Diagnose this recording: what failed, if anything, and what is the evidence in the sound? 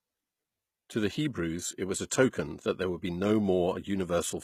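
The codec stage is the culprit: this speech has nothing above 14.9 kHz throughout, plus the smeared, watery texture of a very low-bitrate encode. That points to audio likely squeezed hard first, then re-saved as low-bitrate audio at a high bitrate, so the extra data restores nothing.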